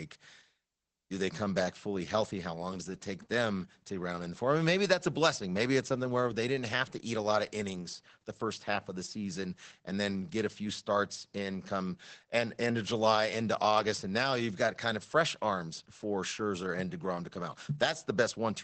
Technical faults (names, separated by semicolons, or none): Opus voice compression